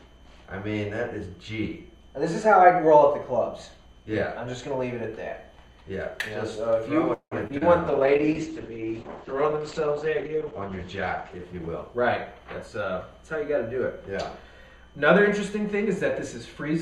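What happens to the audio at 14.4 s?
A call bitrate drop, from 7.89 to 15.44 s: the encoder is starved of bits and the bandwidth narrows, which points to a fall from about 128 to 10 kbps, leaving the sound coarse and muffled.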